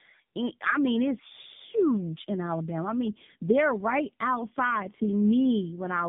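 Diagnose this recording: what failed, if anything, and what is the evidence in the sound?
Codec stage: tandem speech coding. Throughout, the speech sounds rough, muffled and warbly, with nothing above 3.8 kHz. The roughness points to two narrowband speech coders in a row, probably AMR-NB at each end of a G.711 link. The second coder re-encodes the first coder's damaged output, so their errors stack.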